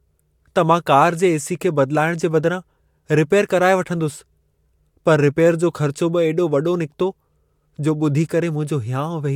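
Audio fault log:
Nothing stood out on listening to the speech in this recording.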